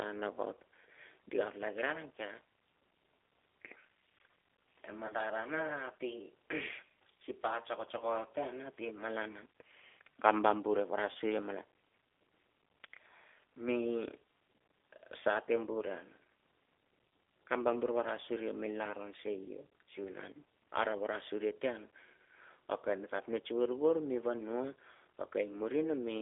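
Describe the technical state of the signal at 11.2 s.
Around 11.2 s the signal is coming out of a VoIP packet loss concealed by the speech codec. Packets went missing from 11.12 to 11.17 s, a gap of about 30 ms that fits three lost 10 ms frames. The decoder bridged it by repeating its last pitch and vocal tract filter with falling gain, so the sound smears into a brief buzzy tone or coloured noise that fades. Because each frame is predicted from the one before, the speech at 11.2 s is still weakened or distorted as the decoder recovers.

Throughout, including this moment, the audio carries G.729 codec damage, plainly audible at 8 kbit/s. The codec rebuilds speech from a vocal tract filter, a pitch predictor and a few pulses in each 10 ms frame, and the line passes only about 300 Hz to 3.5 kHz. The result is narrow, thin speech with a rough, synthetic edge.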